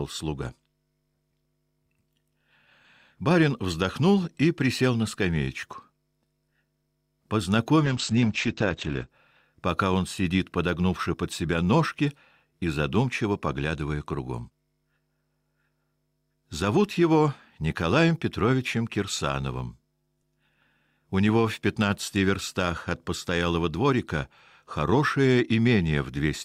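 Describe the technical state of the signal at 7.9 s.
A call bitrate drop runs from 7.86 to 9.17 s: the encoder, starved of bits, codes far more coarsely and narrows the band from 20 kHz to 8 kHz. For about 1.24 s the sound turns rough, watery and muffled, consistent with a fall from roughly 96 to 9 kbps.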